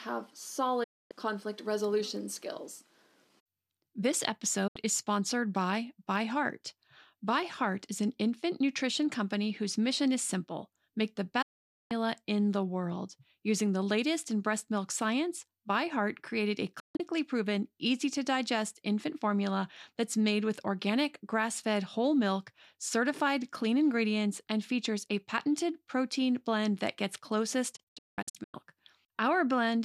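The receiver repeatedly lost the digital signal and muted until good frames returned, a digital broadcast dropout: the speech snaps to silence within about 8 ms at 0.83 s (before "conflict resolution skills"), 4.67 s (before "is sponsored by"), 11.42 s, 16.79 s and 27.76 s (after "protein blend that gets"), for 0.07 to 0.5 s. The last two break into several short holes, and the missing speech is simply gone.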